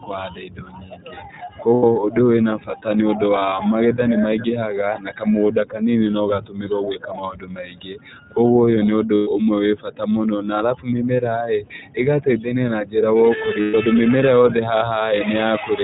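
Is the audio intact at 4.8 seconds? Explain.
No. At 4.8 seconds, as throughout the clip, the speech has passed through the iLBC codec. The sound points to its 13.33 kbps mode with 30 ms frames. Each frame's excitation is coded on its own, with no reliance on the previous frame, and nothing above 4 kHz is carried. The result is plainly audible: narrowband, muffled speech with a slightly rough, synthetic texture that stays clear enough to follow.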